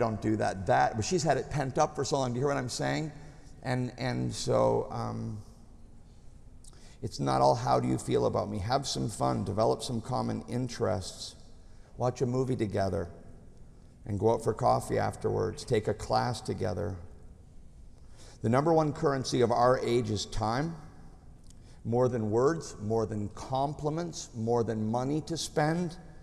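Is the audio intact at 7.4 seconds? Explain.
Yes, the audio is intact at 7.4 seconds, with no dropout, click, distortion or other fault at that moment.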